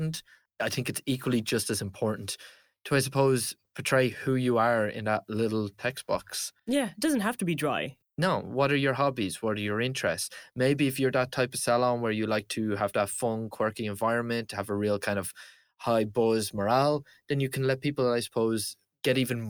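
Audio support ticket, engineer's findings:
Crude rate conversion, 0.0 to 1.5 s. Gritty, inharmonic fizz riding on the speech, strongest on loud and bright syllables, gone after 1.5 s. Pattern points to a 44.1 kHz to 48 kHz conversion by nearest-sample repetition, with no interpolation filter. The periodic repeats alias into tones unrelated to the speech, sitting only around 20 dB below it. Probable component: resampler at stream start.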